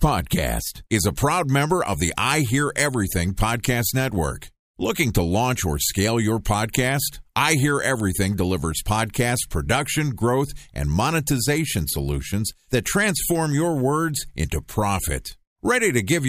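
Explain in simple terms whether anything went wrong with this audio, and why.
Nothing went wrong with this recording, and no technical faults can be heard at any point. The speech comes through steadily, with nothing interrupting or disturbing the sound.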